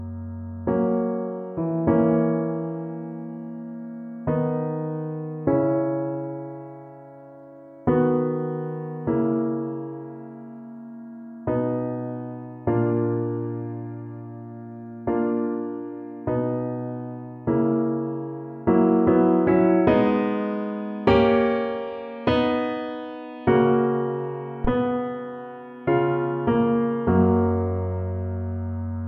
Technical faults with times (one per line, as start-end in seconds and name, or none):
24.65-24.75 phantom power thump